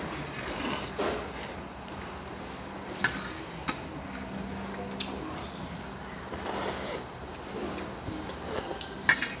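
No faults are audible anywhere in the recording.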